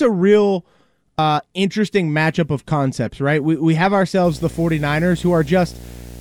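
Compressed frames skipped at 1.19 s in this speech recording: between "a real" and "interesting matchup of concepts" the audio jumps ahead by about a tenth of a second, because whole coded frames were missing or rejected by the decoder as damaged, leaving a join where the frames were dropped. Video or display buzz runs from 4.24 s, just after "we have", to the end: a 60 Hz buzz with hash above it, about 20 dB below the signal, from a screen or video cable coupling its field-rate interference into the audio path.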